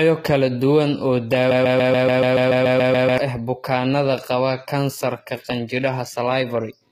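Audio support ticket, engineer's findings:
Throughout: HE-AAC compression artefacts, plainly audible. Treble is synthetic, and nothing is present above 14.9 kHz. Likely cause: HE-AAC encoding at a low rate, which fits a 20 kbps stream. The codec codes only the lower band and fakes the top by copying it upward under a coarse envelope. Harmonics above the crossover don't line up with those below, so sibilants sound gritty and metallic.

1.51 s to 3.18 s: broken-record loop. Starts right after "kala duwan oo". A 143 ms fragment repeats back to back 12 times. Normal playback resumes at "ah bukaanada qaba kansarka". Likely cause: a stalled player, encoder or stream buffer that resent its last held fragment. The audio that should have filled those 1.7 s is lost, not delayed.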